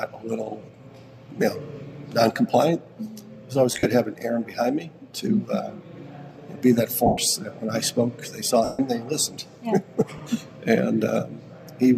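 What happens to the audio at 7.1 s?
Lost LE Audio frames from 7.06 to 7.18 s: about 112 ms goes missing, and the LC3 decoder fills it by repeating the last spectrum with scrambled signs, heard as a fading, noisy smear.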